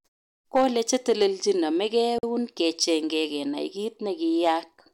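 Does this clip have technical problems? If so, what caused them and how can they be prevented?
Yes. Hard clipping flattens peaks at 0.56 to 1.26 s, 2.61 to 2.84 s and 4.44 to 4.50 s, overdriven by about 5, 4 and 2 dB. The flat tops add harsh upper harmonics. Lower the gain before the converter so peaks keep headroom.

A gap at a join of encoded pieces opens at 2.18 to 2.23 s. It is a 47 ms gap from encoder start delay and end padding left in. Trim that delay and padding when joining, or encode the audio in one pass.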